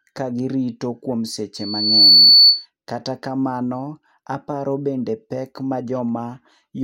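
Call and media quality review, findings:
Loudspeaker feedback squeal, 1.56–2.66 s, after "ka girito kuom": 4.5 kHz tone swells over about half a second to roughly 15 dB above speech. Mic–speaker loop gain exceeds unity.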